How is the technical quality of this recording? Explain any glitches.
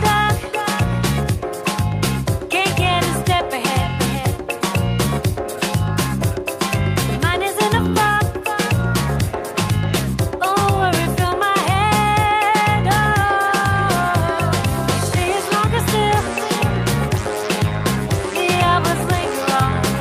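No glitches or technical faults can be heard anywhere.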